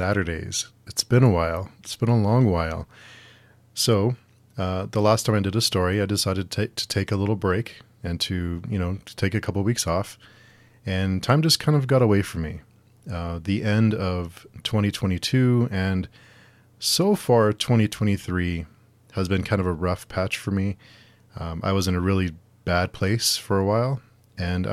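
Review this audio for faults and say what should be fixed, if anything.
Nothing needs fixing here, as there's no fault to be heard anywhere in the recording.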